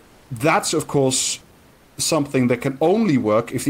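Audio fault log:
0.00–0.29 s and 1.73–1.97 s, comfort noise in place of the background: the room noise becomes a steady, featureless hiss about 2 dB quieter rather than dropping to silence, likely from Opus discontinuous transmission.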